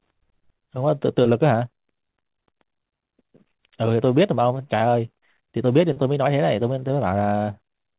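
No faults heard; the speech stays band-limited with nothing above 4 kHz, which fits a narrowband telephone codec such as G.711 mu-law on the call path.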